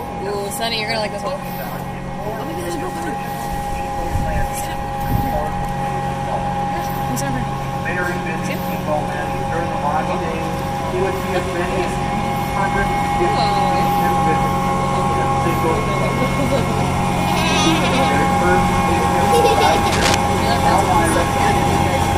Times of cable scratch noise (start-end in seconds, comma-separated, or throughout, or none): 19.92-20.15